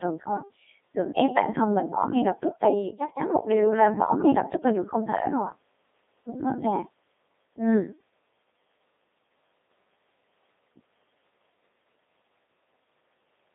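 From start to finish the speech passes through a Codec 2 vocoder, which fits a rate near 2.4 kbit/s. Only pitch, voicing and envelope survive, and sine-wave resynthesis makes it robotic and buzzy, with heavy damage, confined to 250 Hz to 3.7 kHz and empty above 3.8 kHz.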